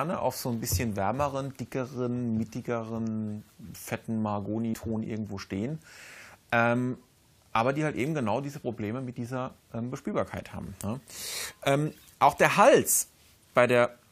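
At 4.73 s, damaged data in a compressed stream produces a short glitch as the decoder misreads corrupt frames.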